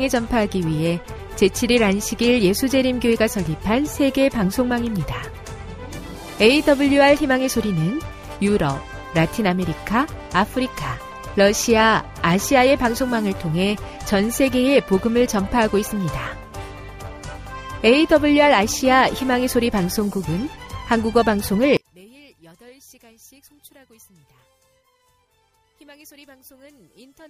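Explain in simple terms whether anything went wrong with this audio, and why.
From 21.77 s to the end at 27.29 s, the sound suddenly drops to a faint trace. The likely cause is one channel inverted: one side of the stereo pair is flipped, so when both sides are combined, the shared sound cancels out.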